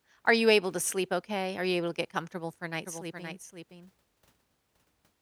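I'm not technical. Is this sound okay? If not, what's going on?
No. A doubled audio track starts abruptly at about 2.85 s, right after "get comfortable for a", and lasts to the end: a somewhat quieter copy of the speech trails half a second behind. Likely a slower second capture path, or an edit holding two copies out of step.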